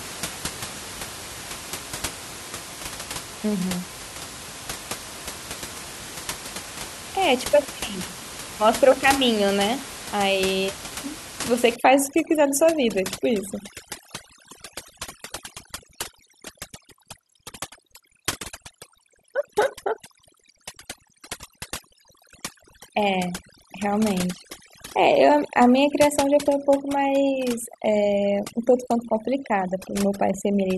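From about 11.76 s right through to the end, you can hear overdone noise removal kick in. The room noise, sitting about 13 dB under the speech before that point, gets hammered by a noise reducer set far too hard. It's chopping individual frequency bands down whenever they drift near its noise estimate, and the softer parts of the speech get dragged out with them. So the gaps drop away and break up into little twinkly specks.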